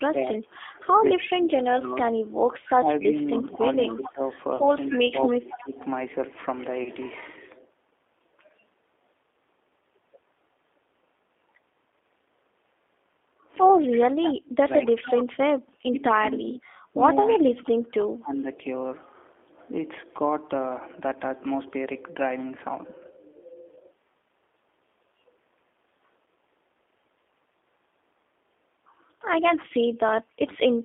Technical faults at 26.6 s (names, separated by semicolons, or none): G.729 codec